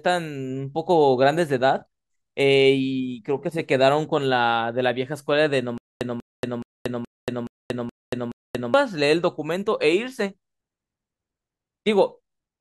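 From 5.78 to 8.74 s the speech turns into a stutter with silent gaps: a 191 ms burst repeats seven times, each followed by about 232 ms of dead silence. The likely cause is a stalled player replaying its last buffer on each retry, so the intended audio is lost.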